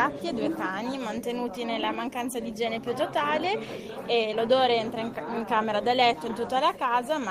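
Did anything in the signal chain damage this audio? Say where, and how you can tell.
No, nothing in the signal chain damaged this audio. No stage between capture and playback leaves an audible mark on the signal at any point.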